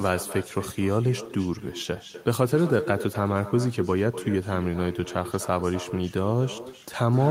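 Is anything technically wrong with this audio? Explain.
Yes. Throughout the speech, there is echo with no canceller: the far end plays the call over a loudspeaker, its microphone captures it, and nothing subtracts it. So every phrase returns roughly a third of a second later as a thinner copy about 14 dB down.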